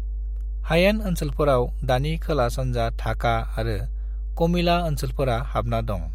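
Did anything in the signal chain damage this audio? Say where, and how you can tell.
Yes. Mains hum sits under the whole clip, a steady 50 Hz tone with low harmonics, strong enough to sit only slightly below the speech. It comes from analogue wiring, a ground loop or nearby transformer. Unlike broadband rumble, it holds one fixed pitch and never drifts.

Chunks out of order appear between 0.58 and 0.62 s. A 20 ms slice plays after the slice that should follow it, leaving a brief jumbled stutter. This points to the buffer or network stage delivering audio late. Unlike a dropout, no sound is missing.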